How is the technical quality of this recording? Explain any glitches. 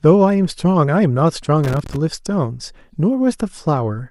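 The recording has one glitch. From 1.64 to 1.96 s, loose connector crackle: a worn contact repeatedly breaks and remakes, chopping the signal into irregular scratchy bursts, unlike evenly spaced digital clicks.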